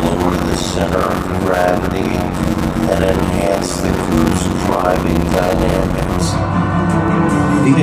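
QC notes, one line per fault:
0.00 to 6.22 s: block size mismatch (padded). A steady 91.9 Hz buzz sits under the sound. The audio plays at 0.533 times normal speed, at about its normal pitch. Each block ends in a short silent gap, which fits 256-sample writes padded out to larger reads.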